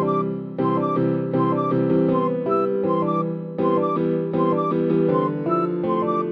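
Nothing goes wrong anywhere in this clip, so there's no technical fault to point to at any moment.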